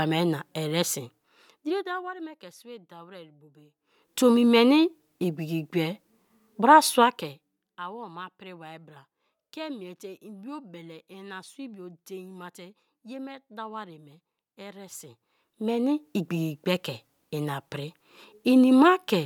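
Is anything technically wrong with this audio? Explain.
No, nothing is technically wrong with this speech recording. The level is turned down or back up smoothly at points, as with a fader, which is a normal part of the recording rather than a fault.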